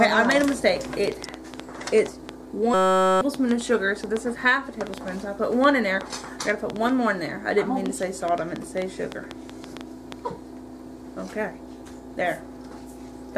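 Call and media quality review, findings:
Train of clicks, 0.09 to 10.13 s. Irregular ticking at about 4.5 per second, some fifty clicks, peaks roughly 10 dB above the sound, audible in pauses too. Likely external interference or a failing interface injecting repeated similar pulses.

System hang loop, 2.74 to 3.21 s. Steady buzz at 188 Hz: one 5.33 ms fragment replayed 88 times while the host or driver stalled and the device kept cycling its ring buffer, which fits a 256-sample buffer. About half a second of audio lost.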